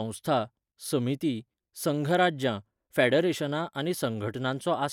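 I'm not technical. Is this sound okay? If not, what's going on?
Yes, nothing wrong can be heard in this recording.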